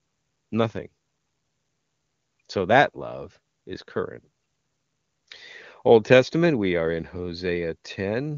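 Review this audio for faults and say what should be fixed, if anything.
No audible faults found; nothing here needs fixing.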